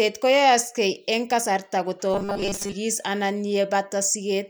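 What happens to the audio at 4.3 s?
At 4.3 s the speech carries on cleanly, with no dropout, click, distortion or other audible fault at that moment.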